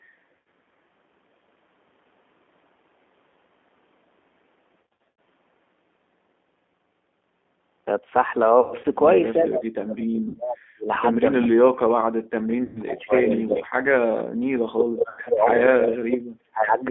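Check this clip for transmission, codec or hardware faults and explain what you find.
The whole clip carries G.729 codec damage, plainly audible: speech confined to roughly 250 Hz to 3.5 kHz, rebuilt from a filter, pitch predictor and sparse pulses, so it sounds rough and synthetic.

VoIP packet loss concealed by the speech codec occurs at 0.37 to 0.46 s, 4.82 to 5.17 s, 8.60 to 8.86 s, 10.28 to 10.37 s, 12.63 to 12.82 s and 15.09 to 15.21 s. The decoder extrapolates the last frame into a fading buzz, with weak, distorted speech afterwards. The largest burst, at 4.82 s, loses 270 ms spread over 360 ms.

Speech suppressed in double talk appears at 9.42 to 10.88 s, 11.39 to 13.70 s, 14.59 to 15.60 s and 15.76 to 16.81 s. The speech dips by up to about 40 dB, likely because an echo canceller muted it during overlapping talk.

An echo leak at 11.40 s adds a delayed copy about 379 ms behind, only about 5 dB below the speech, likely residual loudspeaker echo that the canceller missed.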